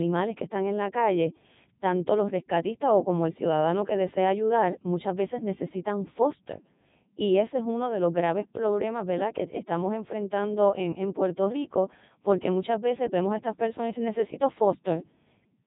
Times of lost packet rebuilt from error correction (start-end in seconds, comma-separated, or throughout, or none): none